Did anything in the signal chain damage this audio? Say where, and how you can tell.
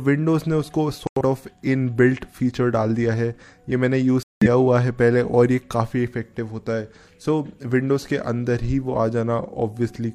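Yes, corrupt frame muted at the codec decode: abrupt silent holes at 1.07 to 1.21 s and 4.23 to 4.47 s, where rejected frames were replaced with silence, timing intact.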